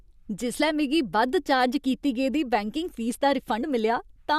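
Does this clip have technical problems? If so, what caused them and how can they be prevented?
Yes. At 3.60 to 3.64 s, just after "फीस दा", compressed frames are skipped: roughly 40 ms of speech never plays, so the audio jumps ahead. Unlike a dropout, there is no silent gap. Prevent it by delivering the file intact and checking its integrity so the decoder receives no damaged frames.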